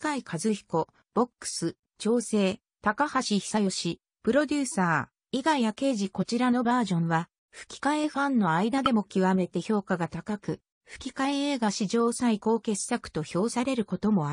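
Damaged data in the compressed stream causes brief glitches at 0.83–0.85 s, 6.21–6.24 s and 8.86–8.88 s, where the decoder misreads corrupted frames and loses sync.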